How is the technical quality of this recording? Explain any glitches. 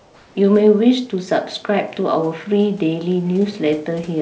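One glitch stands out, at the very start of the recording, heard over a call path whose band stops at 8 kHz, which points to a wideband codec such as G.722.

From 0 to 0.35 s, the sender most likely had discontinuous transmission active, so nothing real was sent before the talker began and the receiver generated comfort noise in place of the background. That synthetic hiss is smoother than the room's real noise. It sits about 32 dB below the loudest parts and is about 3 dB quieter than the genuine background that follows, so the ambience changes when the real background returns.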